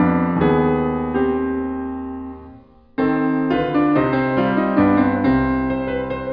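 Nothing in this bit of music stands out as a technical fault, so there's nothing to flag from beginning to end.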